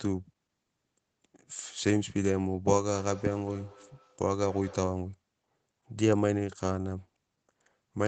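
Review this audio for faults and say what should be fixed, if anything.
From 2.67 to 5.16 s speech repeats, thin and ringing, roughly every fifth of a second: feedback echo between two devices, one device's microphone recapturing another's playback. Keep only one device joined to the call in each room, or use headphones.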